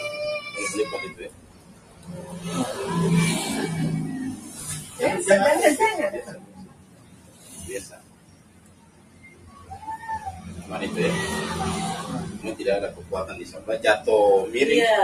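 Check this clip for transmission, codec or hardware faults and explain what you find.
A noise suppressor built for speech was left running on this non-speech audio, and it takes the wrong thing for noise.

Noise suppressor applied to music or sounds: throughout, the suppressor reads steady tones, ambience and decaying tails as background noise and pulls them down, with gain swinging by about 20 dB. Onsets pass while sustained parts sink, so the sound pumps and thins. A waveform shows the envelope breathing rather than holding level. On a spectrogram, sustained bands fade out behind each attack.

Sound cut by the noise suppressor: six stretches are turned down harder than the rest, at 1.11–2.39 s (about 12 dB), 4.36–5.0 s (about 8 dB), 6.22–7.63 s (about 13 dB), 7.83–9.75 s (about 13 dB), 12.91–13.12 s (about 9 dB) and 13.41–13.68 s (about 11 dB). Sustained or fading material there sinks or has its decay cut short. 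The waveform narrows, and the spectrogram shows those regions dimmed across the band.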